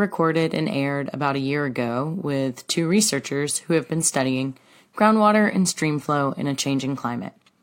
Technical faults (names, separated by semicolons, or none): none